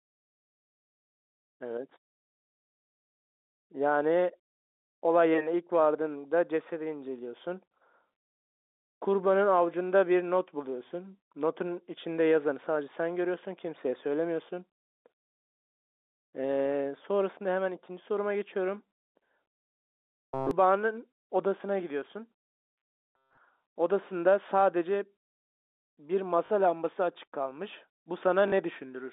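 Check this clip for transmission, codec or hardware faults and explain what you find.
Two kinds of trouble show up here, both late in the clip, on a line that carries the narrow 250 Hz to 3.7 kHz band you'd expect from G.711 telephone coding.

First, robotic sound from repeated short buffers, from 20.02 to 20.51 s and again from 22.55 to 23.38 s. The speech collapses into a flat, metallic buzz pinned at 133 Hz, with practically none of the real signal getting through. That pitch fits a buffer of about 7.5 ms being replayed over and over, likely because fresh audio was arriving too slowly.

Second, packet loss with the last packet repeated, at 26.46 to 26.50 s and at 28.48 to 28.52 s. Each gap is 40 ms long, which fits two 20 ms packets going missing. The receiver filled each gap by replaying the last packet it had, so you hear a short robotic stutter at each spot instead of a clean dropout.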